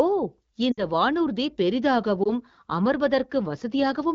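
From 0.71 to 0.84 s the speech sags: about 60 ms of audio was lost, consistent with three consecutive AMR speech frames. The wideband decoder repeats the last good pitch and vocal-tract settings while ramping the gain down, so the sound drops to near silence within two frames before recovering briefly rough. A second, shorter loss at 2.23 to 2.30 s covers about 20 ms, one frame, and produces only a brief dip or warble.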